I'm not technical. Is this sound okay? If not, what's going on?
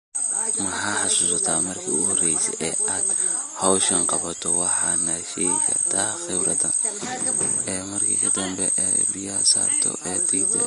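No. The recording was most likely squeezed hard with Vorbis compression, which discards fine detail to save space. Throughout the speech, everything above 10.6 kHz is gone, and the remaining treble sounds hissy and grainy, with softened consonant onsets.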